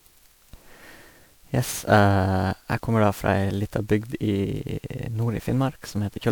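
Throughout the speech there is generation loss: a swirling, smeared, hollow character, with consonant attacks blurred, and nothing above about 20.9 kHz. The likely cause is repeated MP3 encoding at 128 kbit/s, around ten passes, each requantising on a shifted frame grid so noise and spectral gaps pile up. A single encode at that bitrate would sound far cleaner. Here the damage outweighs the bitrate, which is what separates it from ordinary low-bitrate compression.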